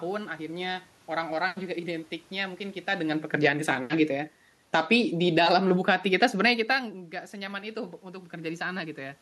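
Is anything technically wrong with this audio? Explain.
Yes. From 3.02 s to 6.98 s there is automatic gain falling: the gain control judged the input too loud, or its background noise too strong, and pulled its gain down by about 6 dB. The level drops evenly across the whole signal, so the room noise sinks along with the speech. That shared drop is what separates it from the talker shifting position around 3 s and 6.5 s, which changes only the voice.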